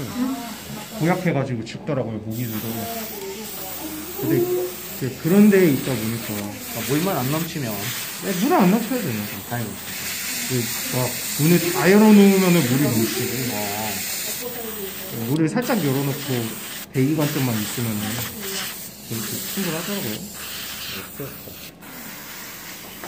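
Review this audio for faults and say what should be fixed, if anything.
Nothing in the recording needs fixing, as no technical faults can be heard anywhere in it. No repair or change to the capture chain is called for.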